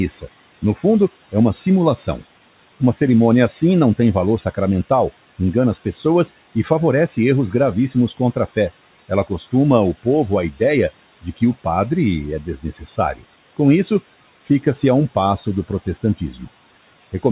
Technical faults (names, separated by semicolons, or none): speech cut by the noise suppressor